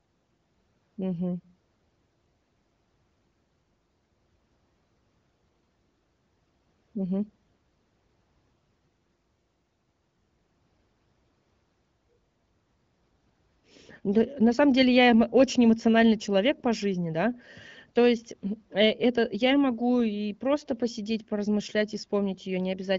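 No technical faults detected.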